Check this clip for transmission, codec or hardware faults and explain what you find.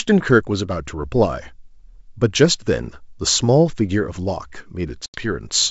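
One transmission fault is present. The G.722 wideband coding at 64 kbit/s is clean. Packet loss on an ADPCM call, 5.06 to 5.24 s: about 80 ms goes silent with hard edges. After the hole, the sound recovers unevenly for some tens of milliseconds while the decoder's predictor and step size resynchronise with the sender's. That uneven recovery, not just a clean gap, distinguishes it from a simple dropout.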